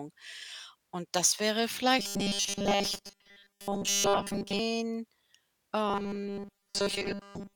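From 1.99 to 4.59 s, just after "das wäre", and again from 5.88 s to the end, the speech becomes a rigid, metallic 200 Hz buzz: robotic sound, likely from repeated short buffers of about 5 ms replacing most of the real audio.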